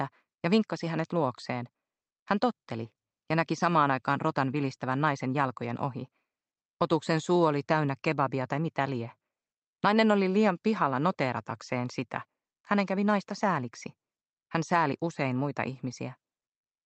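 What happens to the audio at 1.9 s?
Nothing goes wrong at 1.9 s: the sound passes through intact, with only the steady band-limited character of the Opus call path and no dropout, click or glitch at that point.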